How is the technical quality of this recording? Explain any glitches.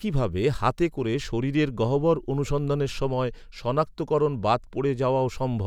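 No glitches or technical faults can be heard here.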